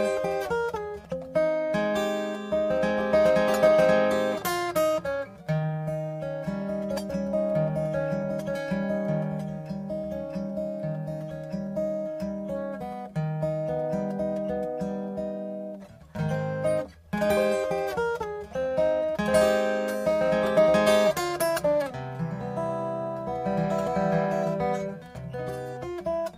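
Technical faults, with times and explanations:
Nothing here to flag, as far as the ear can tell.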